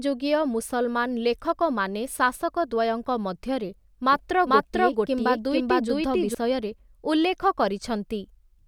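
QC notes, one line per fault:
4.13 to 6.35 s, doubled audio track: A second full-band copy of the speech runs behind the original by around 400 ms. It is about as loud as the original. It carries no decay and no room colour, so it reads as a clean repeat, not an echo. It cuts in abruptly at 4.13 s and drops out just as sharply at 6.35 s. The likely cause is a slower capture path or an edit holding two copies out of step.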